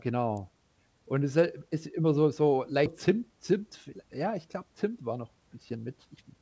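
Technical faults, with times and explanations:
0.37 s, electrical switching spike: a sharp snap sits on top of the speech, far quicker than any speech sound and unrelated to it. This is likely a brief arc from a nearby switch or motor that the audio line picked up.
2.86–2.88 s, skip ahead: the speech lurches forward with no gap, and the sounds on either side butt straight together. Roughly 0.4 s of audio was thrown away while later audio was already queued, so the delay dropped suddenly.
3.08–4.38 s and 4.89–6.42 s, jitter buffer speed-up: the speech sounds hurried but keeps its pitch, about 6% fast in the first stretch and 8% in the second. Short pitch-period slices were repeatedly cut to shrink an overfull buffer, removing roughly 0.1 s and 0.15 s.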